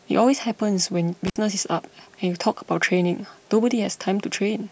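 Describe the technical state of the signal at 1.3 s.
At 1.3 s an intermittent contact opens the line between 1.27 and 1.37 s for about 60 ms, cutting the speech with crackle at both edges, unlike a clean digital dropout's silent gap.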